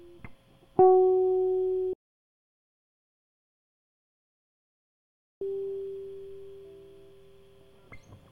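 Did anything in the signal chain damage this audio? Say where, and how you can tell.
Yes. The music cuts off abruptly at 1.93 s and returns mid-flow at 5.41 s. That is an audio dropout to silence lasting about 3.48 s. The gap is silent, with no room tone or noise floor underneath. The input was likely lost at the capture stage, through a disconnected device, a failed link or a stray mute. The recorder kept writing silence meanwhile, so the music from that stretch is gone.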